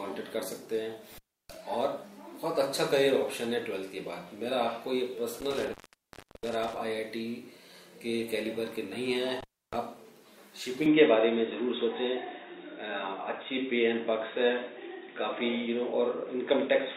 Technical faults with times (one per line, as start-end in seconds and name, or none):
1.11-1.57 intermittent contact
5.40-6.77 intermittent contact
9.40-9.76 intermittent contact
10.86-16.97 input switched to a poorer device